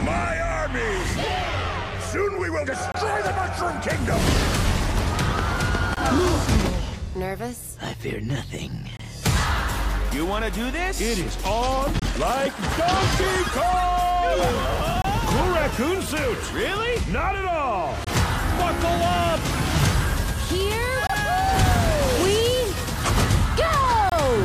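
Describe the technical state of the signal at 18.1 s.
At 18.1 s there is a gap between chunks: a hole of silence about 25 ms long, from 18.04 to 18.07 s. The sound stops abruptly and resumes just as abruptly, with nothing missing, only an interruption at a join between blocks of audio. The position fits chunks 3 s long. On a waveform it shows as a flat, near-silent strip with square edges, and on a spectrogram as a narrow blank vertical band across all frequencies.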